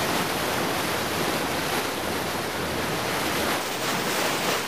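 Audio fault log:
3.61 to 4.67 s, section at the wrong speed: The final stretch of the clip suddenly runs 1.4 times too fast. Pitch jumps up with the tempo, by about five semitones, so the sound turns thin, high and hurried. The switch is abrupt, and the faster playback holds until the clip ends. Speed and pitch moving together like this points to playback against the wrong clock. The likely cause is an edit or player step that resampled this section at the wrong rate.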